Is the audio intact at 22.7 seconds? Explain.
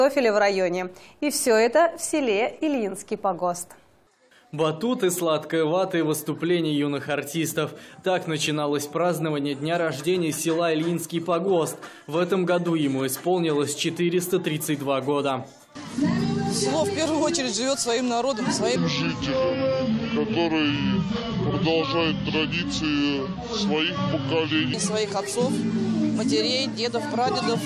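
No. At 22.7 s you're inside a wrong sample rate stretch that runs from about 18.76 to 24.74 s. The samples are being clocked out slower than they were captured, with nothing converting between the two rates, so everything plays at two-thirds speed and drops about 7 semitones. That ratio fits 48 kHz material played back at 32 kHz. It sounds low, heavy and dragged out until it snaps back.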